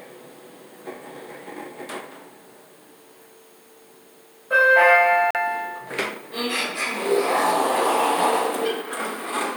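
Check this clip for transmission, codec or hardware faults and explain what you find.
One fault: a Bluetooth stall from 5.31 to 5.36 s. The sound drops to about 43 ms of clean silence, then carries on. Likely, interference delayed packets until the headphones' buffer emptied. A true gap, unlike packet-loss concealment, which fills lost audio with smeared or repeated sound.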